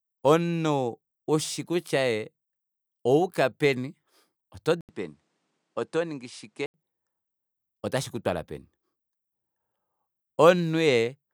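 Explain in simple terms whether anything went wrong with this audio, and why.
The recording's input likely switched to a poorer device from 4.81 to 6.74 s. The speech briefly drops out for about 80 milliseconds at the switch, then sounds duller and a little quieter, with nothing above 10.5 kHz and a faint new background hiss.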